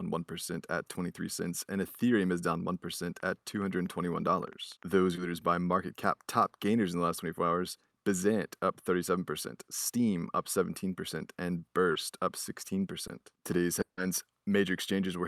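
From 3.20 to 4.95 s, a train of clicks ticks irregularly at about 7.5 per second, roughly fifteen pops near speech level, likely from interference or a faulty connection or supply. Unlike packet loss, the clicks sit on top of the sound without removing any. Short concealed packet losses at 5.15, 7.89, 11.91 and 13.07 s each fill a 20 ms hole (40 ms at 11.91 s) by extending the last sound, heard as a brief smear rather than a gap. At 13.81 to 13.99 s, a long network dropout is likely: 160 ms never arrives, the fill fades and about 110 ms of silence remains before the speech resumes with that part missing.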